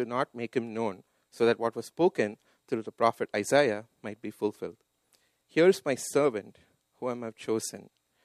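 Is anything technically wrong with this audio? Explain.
No, nothing stood out as technically wrong on listening.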